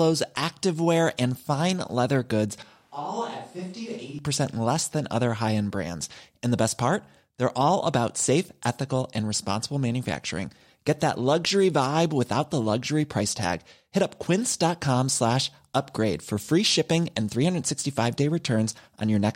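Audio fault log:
2.62–4.19 s, switch to a distant microphone: right after "and fine leather goods" the speech turns suddenly hollow and roomy, thinner in the bass, roughly 10 dB quieter with more room noise, then snaps back at "less than other high". Likely the close mic dropped out and a farther one filled in.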